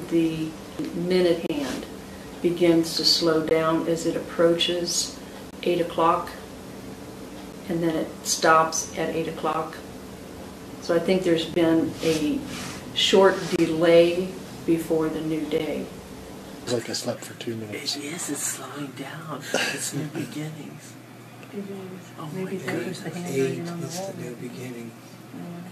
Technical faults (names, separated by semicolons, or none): gap between stream segments